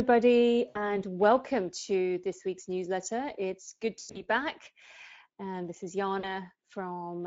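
Throughout the speech, the Speex codec leaves a hoarse, grainy edge and a hissy, noise-like top band. That fits a mid-range setting near 17 kbps, where the excitation is too coarse to carry clean voicing. Unlike broadband noise, the roughness tracks the speech.

VoIP packet loss concealed by the speech codec appears at 0.69 to 0.78 s, about 60 ms, just before "welcome to this week's". It recurs at 3.99 to 4.25 s, scattered across 160 ms with a longest run of 100 ms, and at 6.19 to 6.35 s, about 40 ms, right after "this is". Each time the decoder extends its last pitch and filter into a fading buzz or coloured noise rather than leaving silence or a click as a plain dropout would.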